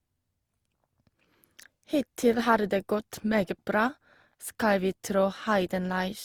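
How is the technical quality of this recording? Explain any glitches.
The quality is compromised by generation loss across the whole recording. The speech was likely decoded and re-encoded about three times through a lossy codec, with the character pointing to Opus at around 48 kbit/s. Each pass requantised the signal on a shifted frame grid, so the noise stacked up. The speech therefore sounds swirly, smeared and hollow, with softened consonant attacks, even though content still reaches up to 20.4 kHz.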